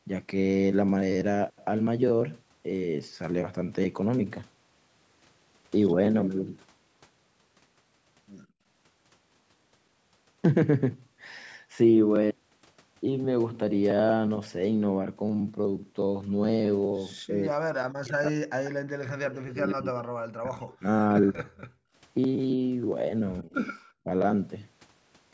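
At 8.47 to 8.65 s the background is gated by the echo canceller. While far-end audio is playing, the canceller pulls the microphone path down by about 33 dB, so the room tone drops out for roughly a fifth of a second and returns once the canceller releases. The same gating recurs at 21.69 to 21.94 s, deeper at about 40 dB and lasting around 0.3 s, heard as a brief hole in the background.

From 17.27 to 18.52 s the near-end speech is suppressed in double talk. The level collapses by around 40 dB over about a second, likely because both sides were talking and the canceller could not separate the local talker from loudspeaker echo, so it attenuated both. At 18.64 s a short echo leak follows. A copy of the speech arrives 122 ms late at roughly 20 dB below the direct sound, likely residual echo the far end's canceller failed to remove from its loudspeaker pickup.

The longest double-talk suppression runs from 18.95 to 21.45 s, with about 2 s of the speech dipped or cut by up to roughly 40 dB, likely from the same overlap. 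Inside it, at 19.69 s, another echo leak appears, again 122 ms delayed and around 25 dB down. The likely cause is again residual loudspeaker echo.

At 23.42 to 23.55 s a milder double-talk suppression clips the speech by about 15 dB for a moment, likely from another short overlap. It is followed at 23.66 s by the loudest echo leak, 122 ms delayed and only about 15 dB under the speech, which likely comes from the same incomplete echo cancellation. Throughout the clip the call microphone processing limits the band to nothing above 8 kHz.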